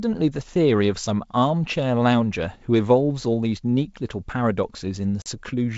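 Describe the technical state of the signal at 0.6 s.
At 0.6 s the speech is intact, with nothing beyond the wideband G.722 telephone coding at 64 kbit/s, whose effect on the sound there is faint at most.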